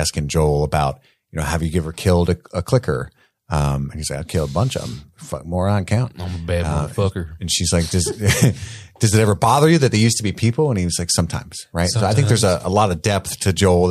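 A speech recording, and nothing in it is technically wrong.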